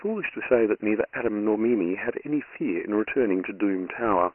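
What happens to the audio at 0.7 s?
At 0.7 s the speech carries Dialogic VOX ADPCM damage, present throughout. Coarse 4-bit coding leaves heavy gritty hiss behind the speech. Nothing remains above 3 kHz, which fits a 6,000-sample rate.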